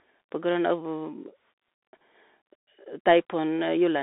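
From start to finish, the speech carries the sound of a Bluetooth CVSD headset codec. The line is confined to roughly 250 Hz to 3.6 kHz, with nothing above 3.8 kHz, so the audio sounds thin and boxy. CVSD sends a single up-or-down bit per sample and adapts its step size; loud high-frequency content outruns the step, giving slope-overload distortion, scratchy s sounds and a granular hiss under the speech. The damage is plainly audible and fits a 64 kbps CVSD link.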